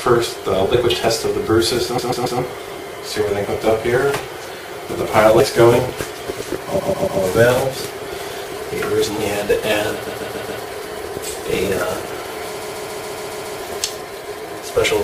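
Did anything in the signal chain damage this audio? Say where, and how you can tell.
Yes. Short skips, each cutting about 50 ms of sound, land at 1.08, 3.45, 5.40, 7.77, 9.72 and 12.23 s. Their regular spacing points to the recorder or buffer stage, likely audio missing between chunks as each 2.0 s block closes.

The clip also has repeated frames from the codec or storage stage. A 139.3 ms block stutters at 1.98–2.39 s and 6.78–7.20 s (3 extra plays each), at 10.06–10.61 s (4), and at 12.61–13.59 s (7). That block length fits six re-sent compressed frames, and the repeats add about 2.4 s in total.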